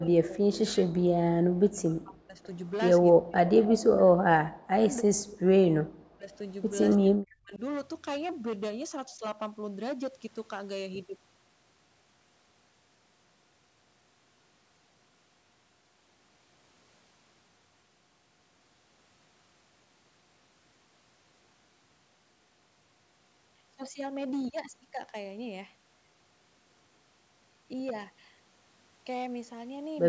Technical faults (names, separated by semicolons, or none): hard clipping; speech suppressed in double talk; echo leak